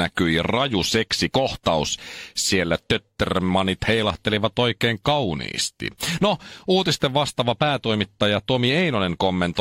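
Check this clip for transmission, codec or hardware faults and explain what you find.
Nothing wrong can be heard in this speech recording.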